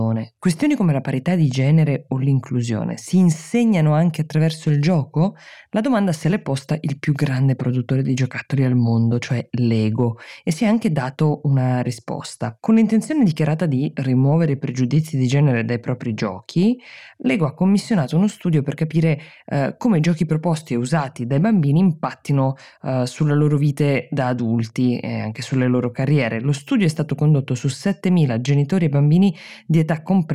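A speech recording, and there's nothing technically wrong to point to anywhere in it.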